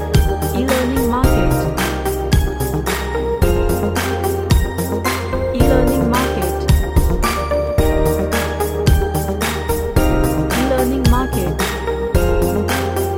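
No dropouts, distortion, clipping, glitches or level jumps are audible anywhere in the recording.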